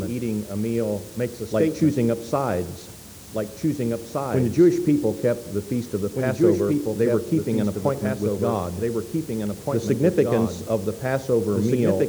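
Throughout, a doubled audio track runs: a second full-band copy trails roughly two seconds behind, somewhat quieter, with no decay, likely from a slower capture path recording it again.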